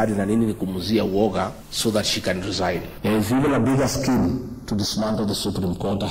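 Throughout, the channels drift apart: the two sides run on clocks roughly 70 ppm apart, so their offset grows to a fraction of a millisecond by the end. In mono, comb notches sweep one way, unlike a flanger's cycling or static comb filtering.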